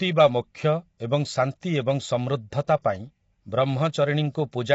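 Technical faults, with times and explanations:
Throughout: low-delay AAC compression. The speech sounds rough and grainy, with a noisy haze filling the gaps between the pitch harmonics, and nothing at all above 7.7 kHz, so the top end is dull and cut off. The cause is likely the low-delay AAC-ELD codec of video calls. Its very short frames resolve the harmonics poorly and spend bits fast, so at what sounds like a low bitrate, around 24 kbps, the damage is plainly audible.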